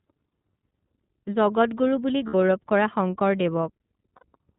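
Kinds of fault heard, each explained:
iLBC codec: The speech passes through a narrowband VoIP codec that codes each 30 ms frame independently, which fits its 13.33 kbps mode. Nothing above 4 kHz survives. The damage is plainly audible as a muffled, slightly rough and synthetic quality.
Lost iLBC frames: Packets went missing, and the decoder filled each gap by repeating the last pitch cycle mixed with noise. A 30 ms gap comes at 0.29 s, 60 ms gaps after "জগতগুৰু বুলি" at 2.27 s and at 4.16 s. Each sounds like a brief buzzy held vowel.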